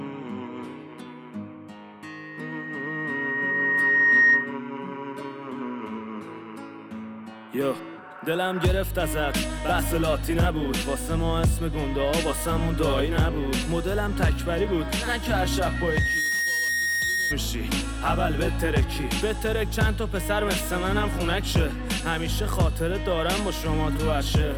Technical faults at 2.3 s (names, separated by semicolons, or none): loudspeaker feedback squeal